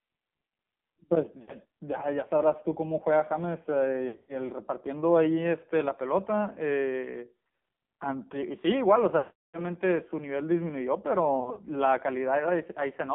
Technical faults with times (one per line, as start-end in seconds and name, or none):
0.00-13.15 AMR narrowband mobile codec
1.42-1.52 lost AMR speech frames
4.08-4.33 lost AMR speech frames
9.18-9.63 lost AMR speech frames
11.40-11.60 lost AMR speech frames